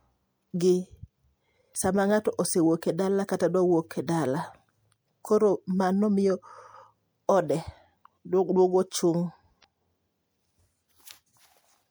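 Damaged data in a compressed stream shows up twice in this speech, from 1.71 to 1.75 s and again from 9.60 to 9.65 s. Each time a short stretch of the encoded bytes is wrong, so the decoder cannot read the frames there correctly. It loses its place in the stream and has to find the next valid frame header before it can decode again. Both errors last about 40 ms and sound like a sudden chirp, squawk, click or short hole that breaks into the speech.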